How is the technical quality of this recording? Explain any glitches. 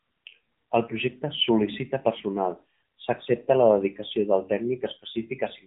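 The quality is limited by one fault that runs through the whole clip. For its entire length, the speech sounds muffled, buzzy and somewhat synthetic. This is AMR narrowband mobile codec damage: the 8 kHz sampling removes everything above 4 kHz, and the coarse vocal-tract model fits a low 7.4 kbps mode.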